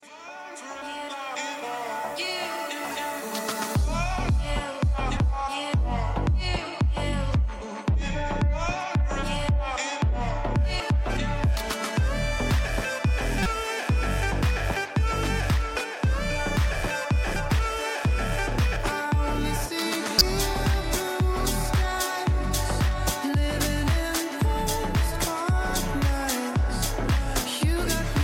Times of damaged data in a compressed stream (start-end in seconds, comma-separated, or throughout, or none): 10.77-10.80, 13.42-13.46, 17.33-17.36, 20.17-20.21